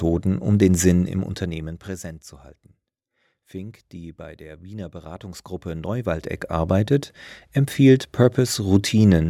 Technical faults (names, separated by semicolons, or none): none